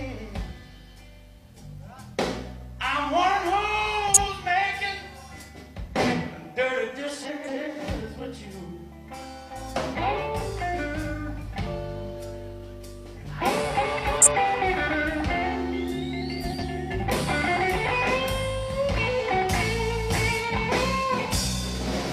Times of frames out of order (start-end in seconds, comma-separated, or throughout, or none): 4.08-4.28, 7.28-7.67, 14.15-14.36, 16.42-16.64